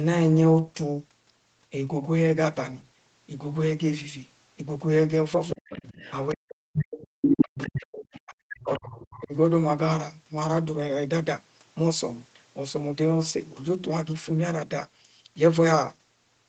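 Other side's voice leaking through appears in this speech recording from 5.5 to 6.12 s, 6.73 to 7.07 s, 7.57 to 8.21 s and 8.68 to 9.14 s. A second voice sits under the talker, strongest at around 5 dB below the main speech near 7 s and faintest at about 20 dB below near 9 s. The likely cause is a loudspeaker on the talker's end playing the far side back into the microphone, with the echo canceller leaving part of it behind. Speech suppressed in double talk follows closely, at 6.33 to 6.66 s, 7.16 to 7.86 s, 8.25 to 8.8 s and 9.14 to 9.34 s. In the first three of these stretches the talker's voice sinks by roughly 40 dB, and in the last one by roughly 25 dB. This likely happens because both sides speak together and the canceller, unable to tell its own talker from the echo, pulls everything down while the far voice is present.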